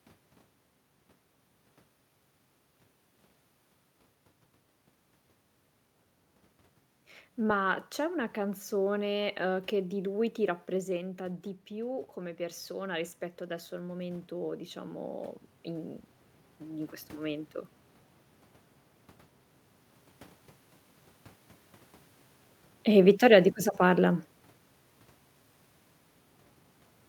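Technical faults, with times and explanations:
10.7–15.09 s, automatic gain rising: just after "che di lui ti" the talker moves back and the voice drops by about 9 dB. The gain control slowly adds about 6 dB over four seconds, so voice and room noise swell together.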